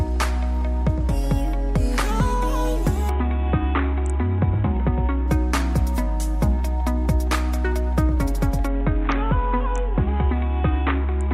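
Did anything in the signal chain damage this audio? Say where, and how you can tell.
Yes. Bluetooth SBC bit pool drop in the codec stage, 3.09–5.28 s and 8.67 s to the end. Treble dulls and grit appears, consistent with the bit pool falling from 28 to about 6, near 60 kbps.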